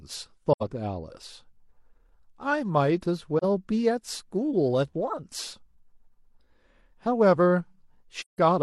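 AAC frame loss with muting occurs at 0.52, 3.38 and 8.2 s. Missing frames decode as silence, fading into soft-edged gaps of 85, 43 and 171 ms.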